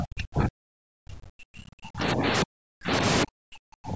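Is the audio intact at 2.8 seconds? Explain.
No. The speech is turned down from 2.43 to 2.92 s, dropping by around 40 dB at its deepest. This is speech suppressed in double talk. An echo canceller likely mistook the talker for loudspeaker echo while both sides spoke, and muted it.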